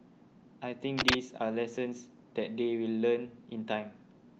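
Speech clip, and the thing that jumps out is a burst of cable scratch noise from about 0.98 to 1.15 s: a short, dense, uneven crackle and rustle sitting well above the speech, roughly 10 dB louder. That ragged texture is likely a worn cable or connector being nudged, its contact resistance jumping around for a moment. Underneath, the top end stops near 8 kHz, which fits an Opus call link running at around 32 kbps.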